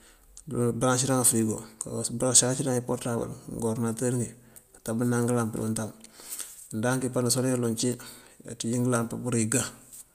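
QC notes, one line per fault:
No technical faults are audible anywhere in the speech signal.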